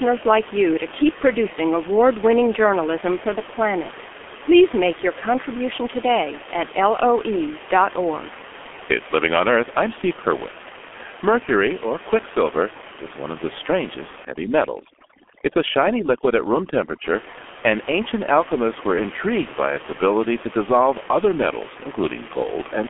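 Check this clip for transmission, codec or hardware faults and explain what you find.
Two faults stand out in this speech recording: a low-rate telephony codec across the whole clip, and a stretch of overdone noise removal.

The G.723.1 codec damage runs from start to finish. The speech sits in a telephone band of roughly 250 Hz to 3.4 kHz, with nothing above 3.7 kHz, and sounds muffled and hoarse, with smeared consonants. The coarseness fits a rate near 6 kbit/s. This codec models the voice in long 30 ms frames and updates that model slowly, so rapid articulation blurs. That heavy rasp separates it from plain band-limiting, which would sound dull but clean.

Overdone noise removal hits from 14.25 to 17.04 s. The room noise, elsewhere about 15 dB below the speech, collapses to near silence with twinkling specks. A noise reducer set too hard is switching individual frequency bands down or off whenever they approach its noise estimate, taking quieter parts of the speech with them. 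Unlike codec damage, this is confined to one stretch, and the background itself changes character.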